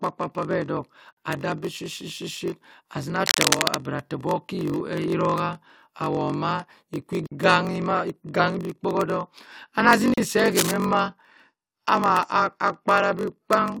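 It's a speech clip with a steady buzz at about 46.9 Hz all the way through. That's a block size mismatch (padded): one stage is writing shorter blocks than the next one reads, and the leftover in each block is zero-filled. So a tiny silent slice lands in every block, and that's your buzz at the block rate. The voice also drags at 0.938 times normal speed while keeping roughly its usual pitch, which fits something like 960-sample blocks being read into a 1024-sample buffer. On top of that, there are three short dropouts from a gap at a join of encoded pieces: 1.13 to 1.17 s (47 ms), 7.27 to 7.32 s (about 50 ms), right before "ma iganhi bh kpohodok", and 10.14 to 10.18 s (about 38 ms), between "iganhi bh kpohodok ana" and "se ahe". In each case the speech drops out, with its edges smeared by the codec, and then picks up exactly where it left off. That's what you get when separately encoded chunks are spliced without trimming the encoder's start-up delay and last-frame padding. 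Finally, there are two bursts of rough, uneven scratching sitting at about the same level as the speech, from 3.26 to 3.78 s and from 10.51 to 10.72 s, just after "se ahe". That's cable scratch noise, most likely a worn cable, connector or control being moved so its contact resistance jumps around.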